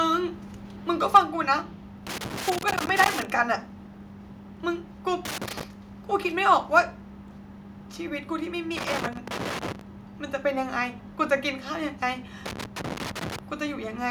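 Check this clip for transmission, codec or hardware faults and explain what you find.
Three kinds of fault are present: a brief microphone overload, a one-step drop in microphone volume at the end of it, and four bursts of loose connector crackle.

At 1.15 to 1.18 s the speech shows microphone overload. The peaks overshoot the converter's ceiling by about 6 dB, and a sizeable share of samples in that stretch are clipped flat, most likely because the input volume was set too high. It sounds like a harsh, crackly edge on the loudest syllable. On the waveform the peaks appear as flat-topped plateaus. On a spectrogram the clipping shows as a smear of added harmonics.

Near the end of it, at 1.17 to 1.18 s, the microphone volume stepped down by about 3 dB in a single jump. The likely cause is the call software detecting the overload and cutting the device's input level. Voice and background both become audibly quieter at once. 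The waveform envelope drops by a clean step, and the spectrogram turns uniformly a little dimmer from that moment on.

Loose connector crackle occurs at 2.07 to 3.30 s, 5.25 to 5.63 s, 8.77 to 9.81 s and 12.46 to 13.39 s. A worn or dirty contact is rapidly making and breaking, which chops the signal and adds pops whenever the line's DC level jumps. The result is irregular scratching layered over the audio. The waveform shows scattered spikes and brief dropouts, and the spectrogram shows clusters of thin vertical broadband streaks.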